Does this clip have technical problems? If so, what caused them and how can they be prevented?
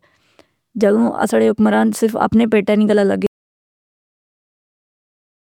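Yes. An audio dropout to silence begins at 3.27 s, right after "اپنے پیٹہ نی گلہ", and lasts to the end of the clip. The speech cuts off mid-flow and is followed by silence with no room tone. That points to the input signal being lost while recording carried on writing silence, most likely from a disconnected device, a failed link or an accidental mute. Anything spoken after that point is gone. To prevent it, secure cables and wireless links, and monitor input levels throughout the take.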